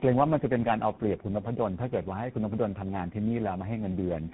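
From start to end the speech suffers tandem speech coding: three codecs in a row, ending in CVSD, each recoding degraded output, leaving rough, warbly sound with nothing above 3.8 kHz.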